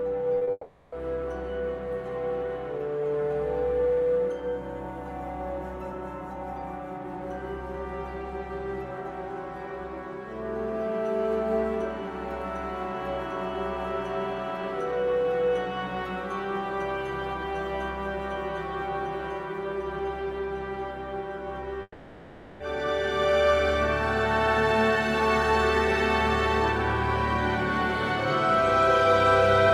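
From 0.35 to 0.50 s there is repeated packet loss, heard as robotic sound. Several short holes come in quick succession, the longest about 30 ms. Each is filled by stretching the last bit of audio. Around half of this span is patched rather than real. The result is choppy, with fragments gone.

At 0.51 s the audio breaks off until 0.93 s. About 410 ms never plays. A fading buzz or hiss carries the last sound forward, then a brief silence follows before the audio resumes. This is likely a long network dropout. A second break runs from 21.82 to 22.61 s. Here about 780 ms is lost. Again a smeared tail fades, a short silence sits at its end, and the audio returns further on, with the gap gone. This too is likely a long network dropout.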